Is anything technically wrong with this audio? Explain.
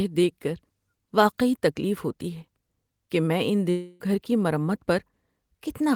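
Yes. From 3.70 to 4.01 s a long network dropout, likely from lost packets, removes about 0.3 s of speech. The receiver fills the gap with a fading buzz or hiss continued from the last sound. A spectrogram shows smeared, decaying harmonics, and the waveform a shrinking pattern before speech resumes without the lost part.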